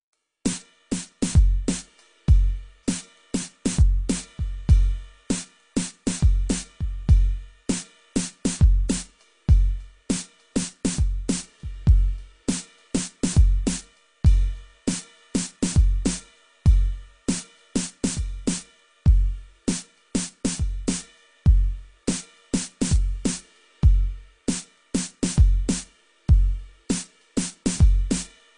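From start to finish the music sounds dull and smeared. Nothing is heard above about 10.2 kHz. Sustained tones warble, and the high detail has a fizzy, watery texture. This is plainly audible codec damage. The likely cause is AAC compression at a low bitrate, near 32 kbps for AAC-LC. The encoder had too few bits for the spectrum. It cut the top band and coarsely quantised the rest.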